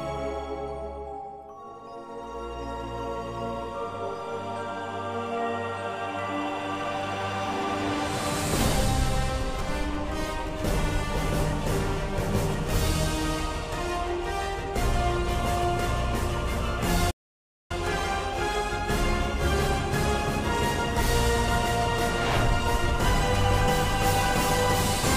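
At 17.10 s the sound just drops out mid-flow and stays silent until about 17.71 s, so there's roughly 0.59 s of dead air before it picks up again. That's a playback stall. The gap is too long and too clean to be a glitch in the signal itself. More likely the player ran dry of buffered data, or its audio thread got held up, and nothing went to the output until it caught up.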